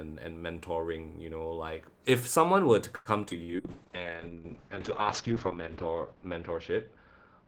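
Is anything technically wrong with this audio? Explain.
Yes, four call-transmission faults cluster in the middle of this speech clip.

At 2.95 to 3.08 s, right after "if someone were to", comes a call audio freeze. The last sound is stretched into a fading buzz or hiss for about 0.1 s, likely because packets stalled and the jitter buffer ran dry. Unlike packet loss, nothing is skipped; the speech simply resumes later.

At 3.30 to 3.33 s, a short concealed packet loss drops about 40 ms of audio. The decoder bridges it with a brief synthesized continuation, heard as a quick smear. It is shorter than the burst that follows.

From 3.43 to 3.51 s, a burst of packet loss removes a run of packets. About 50 ms is filled with a continuation of the last sound that fades as a buzz or hiss, then the speech picks up further on, with 40 ms missing.

From 3.6 s to the end comes a call bitrate drop, from 32 to 6 kbps for over two seconds. 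Bandwidth narrows from 20 kHz to 8 kHz, so the speech turns muffled and watery rather than gapped.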